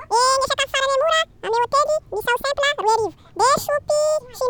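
Audio read two samples at a time (double speed) affects the whole speech clip, from start to finish. The playback side took each pair of samples as a single frame, as if the data held two channels or samples twice as wide. Every stretch of speech therefore passes in half the time it should, running at 2x speed and shifted up 12 semitones, a full octave.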